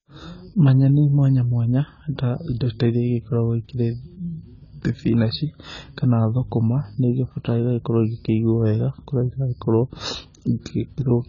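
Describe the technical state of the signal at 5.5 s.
At 5.5 s the speech carries the same heavy damage as the whole clip, likely from AAC compression. Nothing reaches above 7.1 kHz, so it sounds dull, with a smeared, warbly fizz on sibilants, which fits AAC-LC starved at around 16 kbps.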